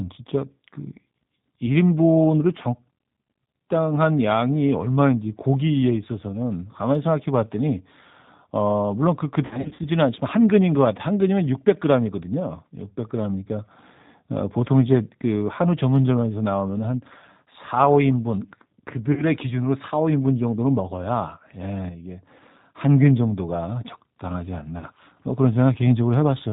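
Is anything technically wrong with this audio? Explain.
Yes, a few things. The whole clip runs through the G.729 codec at 8 kbit/s, so nothing above 4 kHz survives, and the speech has a plainly rough, synthetic edge from the frame-by-frame model rebuild.

There's VoIP packet loss concealed by the speech codec at 9.45 to 9.86 s, with about 220 ms missing in patches up to 60 ms, then shorter gaps of roughly 40 ms at 19.13 to 19.23 s and 24.78 to 24.85 s. The decoder stretches its last pitch and filter into a buzzy tone or coloured noise that fades, and the voice stays weak for a moment after each gap.

From 21.89 to 22.27 s there's a sudden gain jump of about -6 dB, with voice and background dropping together, likely a gain setting applied without a ramp.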